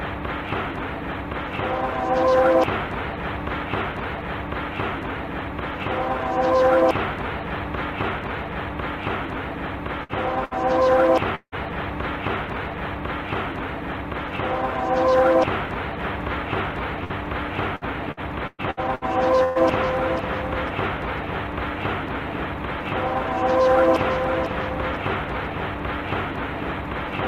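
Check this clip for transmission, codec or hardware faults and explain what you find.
The clip has network transmission faults: four bursts of packet loss, one long dropout and a stretch of repeated loss.

Bursts of packet loss occur at 10.03 to 10.12 s, 10.45 to 10.54 s, 17.04 to 17.13 s and 19.44 to 19.58 s. A short run of packets never arrived in time. The receiver stretched the last sound to cover each hole. The first three gaps hide about 60 ms of audio each, and the last hides about 120 ms. Each is heard as a brief held buzz or hiss, and then the sound jumps ahead.

From 11.35 to 11.55 s there is a longer break in the sound. About 180 ms is missing. The receiver fills the first 170 ms by continuing and fading the last sound. A further 70 ms of silence follows before the audio returns further on. This is likely a long network dropout, where nothing arrived for a while and concealment eventually ran out.

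Repeated packet loss causes robotic sound from 17.76 to 19.05 s. Five separate gaps fall within this span. The longest lasts about 115 ms. Each hole is patched by repeating the last sound, and another hole soon follows. About 28 percent of the stretch is filled-in audio rather than real signal. The result is choppy, with pieces dropping out throughout.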